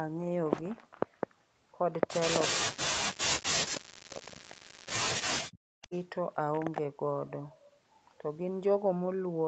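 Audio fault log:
2.47–4.55 s and 5.42–5.93 s, speech suppressed in double talk: the speech sinks hard, down by as much as about 40 dB. Likely the echo canceller heard both ends talking at once, couldn't separate them, and turned everything down.
3.74–3.81 s, 4.1–4.79 s and 5.82–6.02 s, echo leak: a faint copy of the speech comes back 321 ms late, about 15 to 20 dB below the main signal. Likely a speakerphone's canceller letting part of its mic pickup through.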